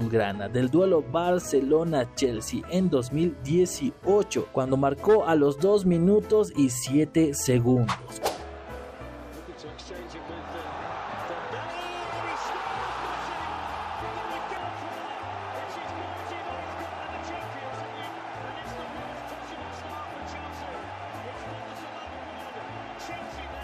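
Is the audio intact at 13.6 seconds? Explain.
Yes, the audio is intact at 13.6 seconds, with no dropout, click, distortion or other fault there.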